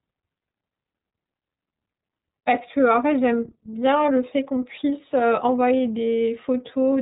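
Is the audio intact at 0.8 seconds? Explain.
No, not really. At 0.8 s you're hearing iLBC codec damage, and it runs through the whole clip. The speech has been squeezed through a narrowband voice codec that codes each 30 ms frame independently, which fits its 13.33 kbps mode. Nothing above about 3.8 kHz survives, so it sounds dull and telephone-like, and the frame-by-frame excitation coding gives it a plainly audible rough, slightly synthetic edge.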